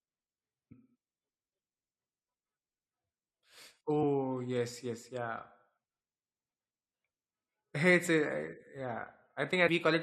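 At 0.71 to 0.73 s and again at 9.67 s, the speech breaks into a brief glitch caused by damaged data in the compressed stream. Corrupted bytes make the decoder misread those frames and lose sync until it finds the next valid frame header.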